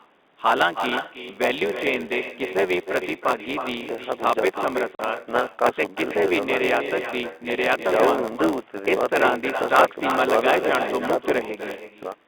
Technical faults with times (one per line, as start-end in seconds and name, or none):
0.00-12.28 echo with no canceller
0.00-12.28 block size mismatch (padded)
4.95-4.99 packet loss filled with silence